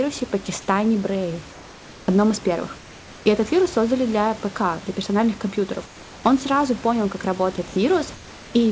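Speech recorded over a call, with the room's background likely replaced by comfort noise in four pauses: 1.52–2.08 s just before "одном из первых", 2.78–3.26 s just after it, 5.86–6.24 s after "для персональных компьютеров", and 8.14–8.54 s. Each time the textured room noise turns into a smooth, featureless hiss about 2 to 3 dB quieter, which sets it apart from a plain dropout that would fall to silence. At 7.56 s the sound is briefly dropped by the voice detector, likely discontinuous transmission treating sound as background. About 10 ms of sound is swapped for that same steady noise. Across the clip nothing is heard above 8 kHz, the normal band limit of the wideband call codec.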